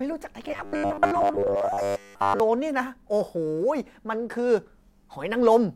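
From 0.48 to 2.40 s the speech takes on robotic sound from repeated short buffers: a rigid, metallic buzz near 100 Hz. That fixed pitch fits a likely 10 ms chunk looped while most real audio is skipped, unlike dropouts, which leave silent gaps.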